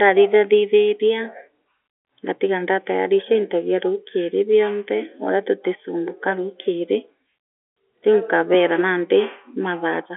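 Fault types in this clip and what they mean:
No fault types occur in this clip, so there is nothing to explain.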